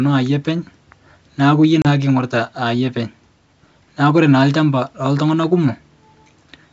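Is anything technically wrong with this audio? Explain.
Yes, one glitch. At 1.82 to 1.87 s there's ADPCM packet loss. About 30 ms, a few packets' worth, drops to hard-edged silence. The decoder's predictor then falls out of step with the sender's, so the sound returns briefly off before settling.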